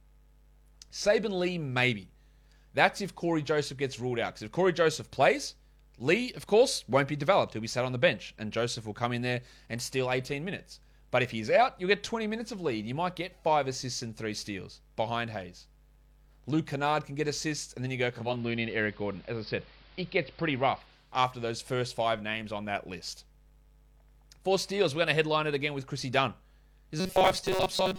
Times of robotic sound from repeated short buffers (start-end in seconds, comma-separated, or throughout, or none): 27.00-27.99